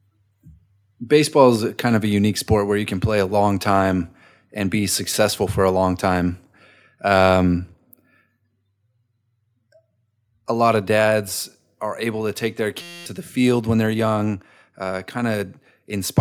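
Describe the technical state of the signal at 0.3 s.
At 0.3 s the signal is intact, with no audible dropout, distortion, noise burst or other technical fault.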